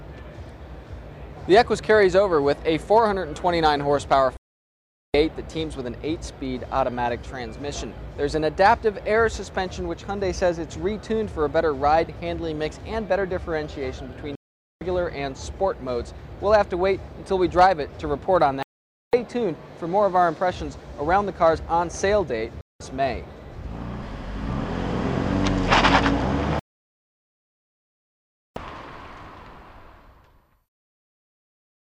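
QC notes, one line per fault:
4.37–5.14 s: digital broadcast dropout, sound cuts to silence for about 0.77 s as the receiver mutes on lost or corrupt frames, then resumes with that stretch missing.
14.35–14.82 s: digital broadcast dropout, a shorter hole of about 0.46 s where the decoder muted until valid frames returned, and the programme carries on past the gap.
18.63–19.14 s: digital broadcast dropout, audio drops out for about 0.5 s because frames failed and were discarded, so the material sent during that gap is gone.
22.61–22.81 s: digital broadcast dropout, a brief blip of silence around 0.19 s, consistent with a handful of bad frames muted by the receiver before reception recovered.
26.59–28.57 s: digital broadcast dropout, the longest gap at nearly 2 s, where signal loss kept the receiver muted until good frames came back, losing everything broadcast in between.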